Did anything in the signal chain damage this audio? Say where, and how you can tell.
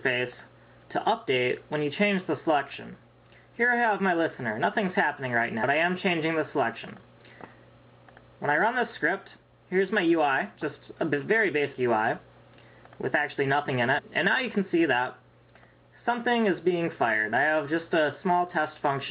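Yes, at the codec or storage stage: compressed frames skipped. At 5.62 s the audio jumps forward by roughly a fifth of a second, and at 11.72 to 11.74 s and 13.97 to 14.00 s it jumps by roughly a tenth of a second each time. Whole frames were missing from the file or rejected by the decoder as damaged.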